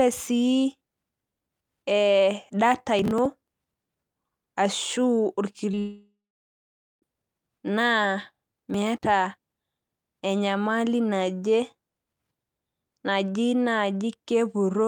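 From 2.99 to 3.25 s, processor overload crackle: roughly fifteen 10 ms buffers are skipped back to back, giving a gritty, hard-edged tearing rather than a smooth smear. At 5.71 and 5.75 s, two short concealed packet losses, about 20 ms each, are bridged by continued sound and heard as a brief smear or wobble, not crackle. From 5.79 to 7.04 s, a likely long network dropout: the concealment fades into about 0.85 s of silence before the speech resumes further on, with the missing part gone. From 8.42 to 9.03 s, about thirty skipped buffers bring the crackle back.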